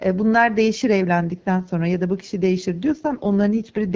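At 2.90 s an AMR rate drop kicks in and lasts to the end: the coder falls from about 12.65 to 6.6 kbit/s, so the speech goes rough, raspy and synthetic with no gap.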